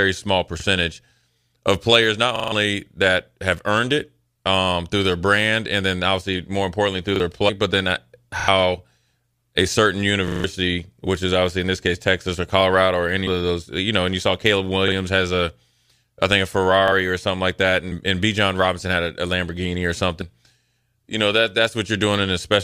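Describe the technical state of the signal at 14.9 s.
At 14.88 to 14.92 s, just before "has a", the speech hits a repeated buffer: fresh audio wasn't ready in time, so the playback device sent out the previous block a second time. That single 40 ms repeat, which fits a 40 ms buffer, sounds as a brief stutter with hard joins at each edge, and around 40 ms of real audio is skipped. Unlike a dropout, there is no gap of silence, only the same sliver heard twice.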